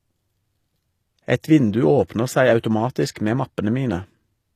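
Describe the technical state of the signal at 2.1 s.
At 2.08 s there is a brief pre-echo, about 17 ms long. A transform codec spreads its quantisation noise across a whole block. Here a sharp attack falls late in the block. Noise sized for that attack leaks into the quiet just before it, so a short hiss runs ahead and the onset sounds softened.

Underneath, the whole speech clip carries plainly audible damage, likely from HE-AAC compression at a low bitrate, consistent with about 24 kbps. The treble is rebuilt from copied lower bands, not the original. Sibilants turn gritty or lispy. Nothing remains above 14.9 kHz.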